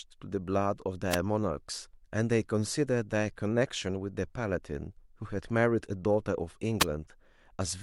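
Wireless microphone noise hits occur at 1.10 to 1.16 s and 6.79 to 6.84 s, each a brief burst of static over the speech. The FM radio link momentarily fades as reflected signals cancel, letting receiver noise rise above the audio.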